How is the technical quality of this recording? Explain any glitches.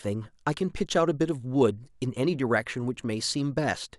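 Nothing in the recording stood out on listening, so there are no glitches to explain.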